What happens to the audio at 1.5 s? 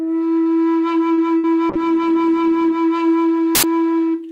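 Just before 1.5 s, from 1.37 to 1.45 s, the music is hit by a burst of packet loss. About 60 ms of audio never arrived in time, so the receiver held the last sound and faded it down, giving a brief smeared, sustained tone that dies away. Playback then jumps ahead, skipping roughly 60 ms of the music. On a spectrogram the band looks frozen and dimming before a sharp edge; the waveform shows a shrinking envelope, then an abrupt restart.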